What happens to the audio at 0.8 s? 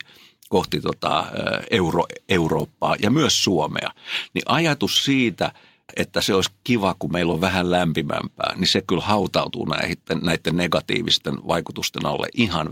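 Nothing goes wrong at 0.8 s; the audio plays through that moment intact, with no dropout, click or distortion.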